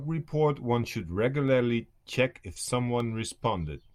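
Dropped samples at 3.00 s: a tiny fraction of a millisecond of the speech is likely missing, so the waveform leaps abruptly to a later value. Nothing audible is lost, but the jump produces one sharp click, seen as a thin vertical line across the spectrum.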